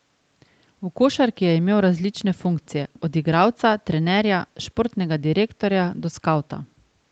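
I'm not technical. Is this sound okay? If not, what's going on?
Yes, the speech is fine: nothing is audibly wrong, and the top end stops at about 8 kHz, as is normal for a call.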